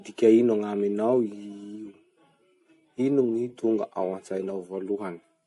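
From start to finish the speech has a watery, swirling quality, with s sounds turning chirpy and metallic, consonant attacks smeared, and nothing heard above 11.3 kHz. The damage is plainly audible. The likely cause is MP3 compression at a low bitrate, something in the region of 48 kbps. Starved of bits, the encoder cut the treble at a fixed point and dropped weak frequency lines that flicker on and off between frames.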